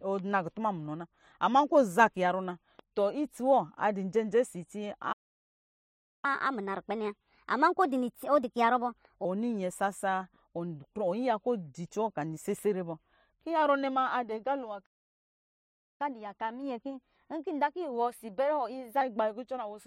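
Playback stalls at 5.12 to 6.25 s and 14.85 to 16.01 s cut this speech recording off in mid-flow, each leaving a silence of about 1.1 s before the audio resumes. The likely cause is the player running dry of buffered data or having its output thread blocked, so nothing reached the output until it recovered. Catch-up at higher speed follows each gap. From 6.25 to 9.25 s the speech runs at 1.25 times normal speed, with pitch raised by roughly four semitones, and from 16.01 to 19.01 s it runs at 1.1 times, about one and a half semitones sharp. In both cases the player is resampling its backlog faster to win back the time lost in the stall, which is why speed and pitch rise together and then settle back to normal after three seconds.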